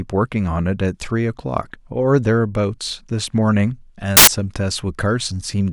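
At 4.17 s, and lasting to 4.27 s, the speech gives way to a burst of loud, harsh broadband noise: samples built from the wrong bytes. For about a tenth of a second, each sample's bytes are joined in the wrong order or at the wrong offset, so the rapidly varying low bits become the dominant part of each value. Unlike a clipping crackle or a dropout, the speech isn't clipped or silenced but replaced by a harsh hiss.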